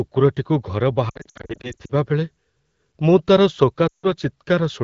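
Speech over an AMR wideband (HD Voice) call with lost AMR speech frames: brief warbles and dips scattered from 1.09 to 1.93 s, then a quick drop to near silence around 3.88–4.08 s as the decoder reuses the last good frame's settings with falling gain.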